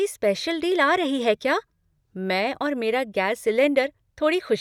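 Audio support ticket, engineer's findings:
No faults found on review of the speech recording. Nothing to escalate.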